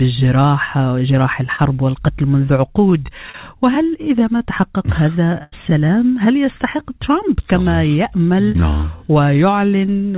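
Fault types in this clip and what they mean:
short concealed packet loss: About 20 ms of audio never reached the decoder in time, so the receiver extended the last sound, leaving brief smears near 1.56, 3.32 and 8.52 s.
burst of packet loss: About 80 ms of consecutive packets were lost, so the receiver continued and faded the last sound at 5.43 s, then resumed with that stretch missing.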